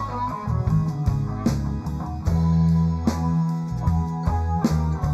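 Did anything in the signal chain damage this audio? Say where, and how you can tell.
Yes. Channel delay (comb filtering) runs throughout the clip, from start to finish. One channel was late relative to the other by roughly 0.15 ms, a few samples, before the two were summed to mono. The damage happened wherever the channels lost alignment ahead of that fold-down. Content common to both channels cancels at evenly spaced frequencies, with the first notch around 3 kHz and further notches near 9 kHz and 15 kHz. The result is a fixed, hollow, phasey colouring that never moves.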